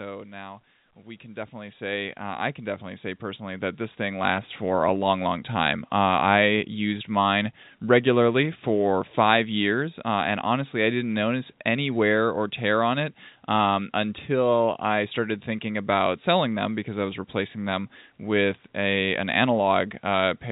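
From 0.05 to 0.69 s, automatic gain falling: the gain control judged the opening too loud and eased its gain down by about 3 dB, so the speech and its background sink together. On a waveform, the envelope tapers slightly across that span.

Then, from 0.93 to 5.55 s, automatic gain rising: finding the level too quiet, the control pushed gain up by about 17 dB over several seconds, so voice and noise floor swell in step. On a waveform, the envelope widens steadily, and on a spectrogram the background brightens along with the speech. Throughout, the call path's band limit shows as empty spectrogram space above 4 kHz.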